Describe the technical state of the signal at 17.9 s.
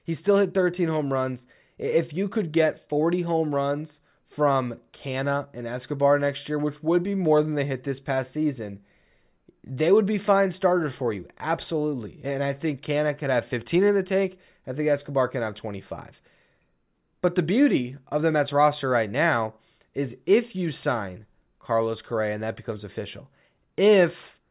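At 17.9 s the speech signal is intact, with no audible fault at that moment.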